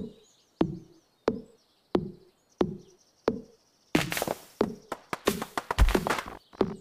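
No technical faults are audible anywhere in the clip.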